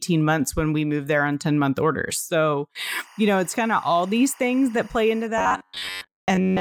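From 2.79 to 5.27 s there's timecode bleed. A chirpy, warbling whine flips between tones around 1 and 2 kHz and sits about 25 dB under the speech. The pattern fits 24 fps linear timecode leaking in from a neighbouring track or cable.

Then from 5.38 s to the end, the speech turns into a stiff metallic buzz locked at 93.8 Hz that only loosely tracks the talking. That's robotic sound from repeated short buffers, likely a roughly 10.7 ms chunk being looped to cover missing audio, with most of the real material skipped.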